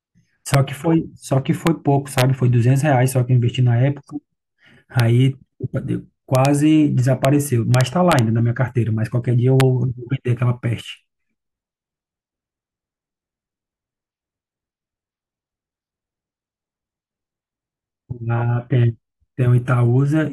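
Integer overflow hits the speech at 0.54, 1.67, 2.18–2.22, 5.00, 6.35–6.45, 7.25, 7.75–8.19 and 9.60 s. Peaks only about 1 dB over full scale wrap to the opposite sign instead of limiting, so you get hard, violent cracks, far nastier than clipping.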